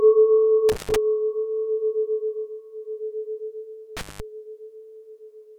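Intermittent contact breaks up this everyday-sound recording twice, from 0.69 to 0.96 s and again from 3.97 to 4.20 s. Each time a loose plug or cable connection briefly opens, so the signal drops out for about 126 ms and then about 187 ms, with crackle where the contact scrapes open and closed. During each gap faint hiss remains, because the source is disconnected from the input.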